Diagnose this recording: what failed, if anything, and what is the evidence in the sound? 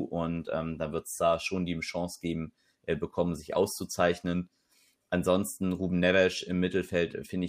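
A faint, steady ticking runs under the speech from 0.16 s to 7.46 s, roughly ten ticks a second and around seventy in all, clearest on louder passages. These are clock slip clicks, most likely at the converter stage, where two devices run on unsynchronised clocks differing by a couple of hundred parts per million, so a single sample is dropped or repeated each time the drift accumulates to one sample.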